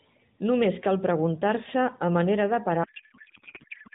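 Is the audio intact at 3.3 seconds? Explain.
No. From 2.84 s, right after "a manera de", to the end at 3.94 s, the speech turns into garbled noise and warble that barely tracks it. This is a codec payload misread: octet-aligned AMR frames are being unpacked as bandwidth-efficient, shifting every bit field.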